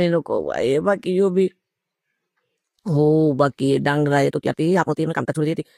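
It's a short speech clip, and things go wrong from 4.26 s right through to the end at 5.77 s. That last stretch is a time-stretched section running at about 1.95 times the normal pace, so it comes across rushed while the pitch doesn't budge. The abrupt jump in pace with no pitch shift most likely means software squeezed that part to fit a length by dropping short pieces of the audio.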